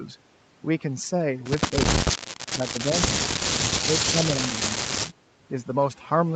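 Overdone noise removal runs through the whole speech clip: bands near the noise estimate are pulled down, leaving near-silent gaps with twinkling specks. Unlike a simple gate, this happens band by band. The voice then dips at 1.71 to 1.83 s (about 10 dB), 2.57 to 3.45 s and 3.84 to 5.03 s (about 20 dB), losing level. This is likely speech suppressed in double talk, with an echo canceller ducking the talker while the far side spoke. These are level drops within the already band-limited sound (nothing above 8 kHz), not spectral warble.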